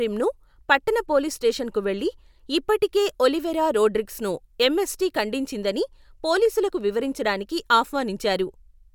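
No technical faults can be heard anywhere in it.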